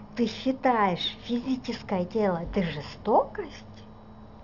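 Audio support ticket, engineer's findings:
Aliasing throughout: sibilants gritty and metallic, folded energy around 20 dB below the speech. Spectrogram shows energy packed hard against 6 kHz with mirrored components, pointing to an unfiltered 16 kHz to 12 kHz resample.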